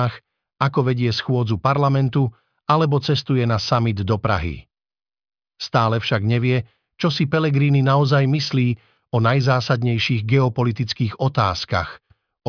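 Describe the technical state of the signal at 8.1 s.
At 8.1 s the speech signal is intact, with no audible fault at that moment.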